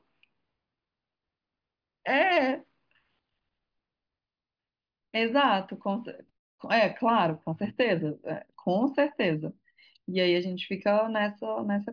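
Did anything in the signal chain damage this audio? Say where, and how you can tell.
No, nothing in the signal chain damaged this audio.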